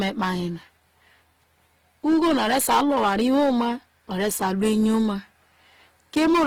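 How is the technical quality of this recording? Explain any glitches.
Technical quality is poor, with constant codec damage and repeated overload distortion on the speech.

Throughout, the sound is grainy and rough rather than swirly, and it keeps full bandwidth. That points to Opus compression in its music mode as the likely cause, at a low rate of roughly 16 kbps.

Hard clipping hits from 0.01 to 0.31 s, 2.07 to 3.68 s, 4.21 to 5.11 s, and 6.17 s to the end. The peaks are overdriven by about 7 to 11 dB and flattened, giving harsh fuzz.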